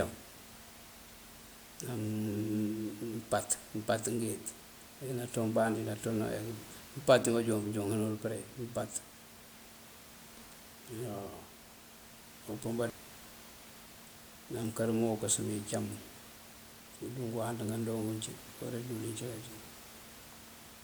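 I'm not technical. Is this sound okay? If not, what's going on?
Yes, no faults here.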